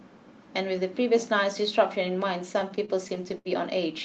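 Speech, with repeated stalls (stutter) between 2.53 and 3.47 s: ten short hold-ups, the longest about 72 ms, stretch the passage by roughly 173 ms. The jitter buffer kept running dry, and the receiver extended the last sound each time. Unlike packet loss, nothing is dropped; the speech drags and catches rather than skipping. The call path's codec caps the audio near 8 kHz.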